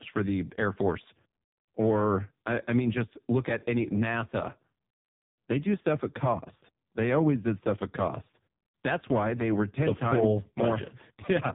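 From start to finish, the speech carries the sound of the AMR narrowband mobile codec, AMR-NB. Nothing above 3.7 kHz gets through, so the top end is gone. The codec models the vocal tract and rebuilds each 5 ms from a pitch predictor and a few pulses. Here the damage is heavy. The voice sounds buzzy and synthetic. That points to a very low mode, which fits a bitrate of about 5.15 kbps.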